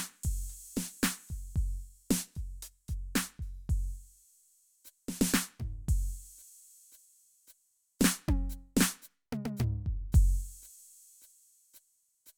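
Nothing in this music goes wrong technically, so there's no fault to point to at any moment.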